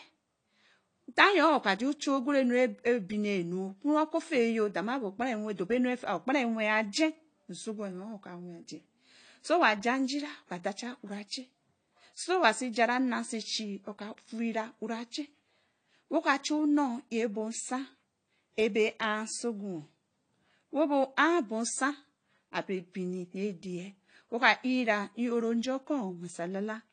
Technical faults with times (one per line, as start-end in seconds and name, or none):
0.00-26.92 AAC compression